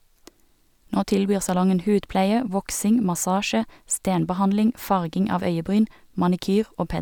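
No technical faults can be heard anywhere in this speech recording. There is nothing here that calls for a time mark or an explanation.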